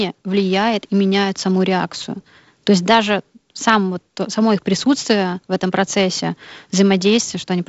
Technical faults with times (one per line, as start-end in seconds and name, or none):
none